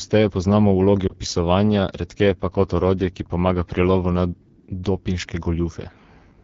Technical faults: AMR wideband (HD Voice) codec; lost AMR speech frames

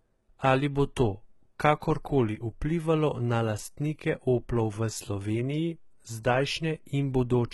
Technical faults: HE-AAC compression

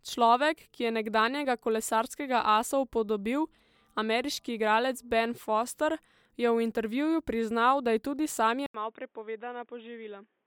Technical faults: input switched to a poorer device

